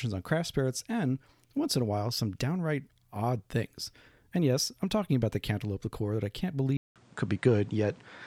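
Input likely switched to a poorer device at 6.77 s: a 0.19 s gap, then speech capped at 9.7 kHz, a slight level shift and faint new noise.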